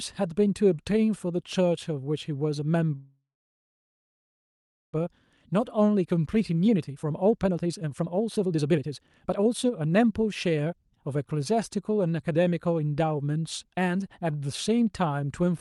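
A speech recording sent over a call path, heard at about 12 kHz bandwidth, which fits an Opus codec, contains two faults. From 2.95 to 4.95 s there is a call audio freeze. Packets were likely held up in transit until the jitter buffer ran dry, and the receiver filled about 2 s by extending the last sound into a decaying buzz that dies to silence for roughly 1.7 s. When the packets arrive, the speech resumes where it stopped, so a gap has been inserted, nothing is lost, and everything afterwards arrives about 2 s late. From 5.06 to 10.80 s a jitter buffer speed-up follows. The buffer held far more audio than its target after the stall, so the receiver repeatedly cut pitch-period-sized slices, about 2 s in total, to drain the excess. The speech runs at about 135% speed with unchanged pitch and sounds rushed.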